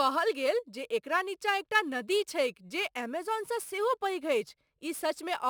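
Crude rate conversion runs through the whole speech clip. Samples were repeated rather than filtered, which fits a 44.1 kHz to 48 kHz change. The pattern error sits about 25 dB below the speech. It adds a gritty, inharmonic fizz that tracks loud and bright sounds.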